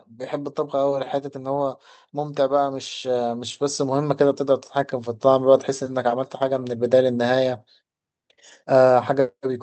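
From 0.3 s to 4.48 s there's automatic gain rising: the AGC decided the input was too quiet and slowly cranked its gain by about 8 dB, so the speech and the background swell up together, with the top end capped near 8 kHz by the call codec.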